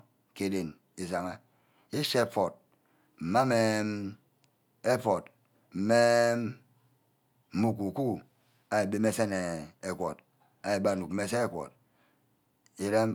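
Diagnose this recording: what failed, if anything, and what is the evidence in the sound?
Nothing failed: no stage in the chain, from capture through to playback, leaves any audible fault in this speech recording.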